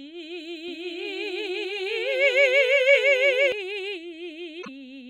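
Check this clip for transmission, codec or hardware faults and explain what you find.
Two faults are audible in this music.

Doubled audio track, 0.68 to 3.52 s: a second, equally loud copy trails roughly 0.7 s behind, likely from a slower capture path, starting and stopping abruptly.

Damaged data in a compressed stream, 4.59 to 4.68 s: corrupted frames make the decoder lose sync and hunt for a header, producing a brief disruption.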